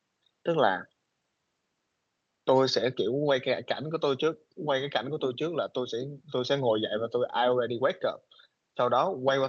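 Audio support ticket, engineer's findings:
No faults found in the speech recording. Call path working as expected: content tops out at 8 kHz, with the usual coding texture that fits Opus at around 32 kbps.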